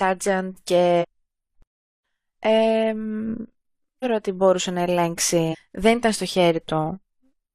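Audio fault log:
0.98–1.05 s, 4.00–4.05 s, 5.48–5.56 s: damaged data in a compressed stream. Corrupted bytes made the decoder misread frames and lose sync until it found the next header, so each spot gives a brief chirp or blip, the second just before "ότι μπορούσε".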